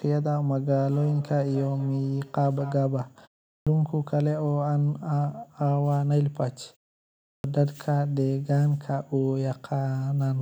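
Speech, with a feedback echo between two devices from 0.91 to 2.86 s. Each phrase returns at a fixed interval of about a fifth of a second, peaking at about 17 dB below the speech. Unlike room reverberation, these are distinct, thinning repeats: a second device replays the call and the first device's microphone sends it back uncancelled. There are also two clipped starts after a pause. At 3.51 s, after a 0.32 s gap, the first 156 ms are swallowed, and at 7.30 s, after 0.62 s, 141 ms are lost. The output device is sleeping through silence and waking late.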